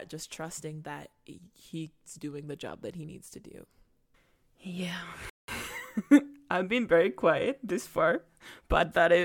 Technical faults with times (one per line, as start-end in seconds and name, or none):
5.30-5.48 rebuffering stall